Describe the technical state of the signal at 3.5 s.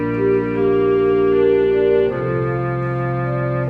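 Nothing at 3.5 s points to a technical fault; the signal is intact at that point.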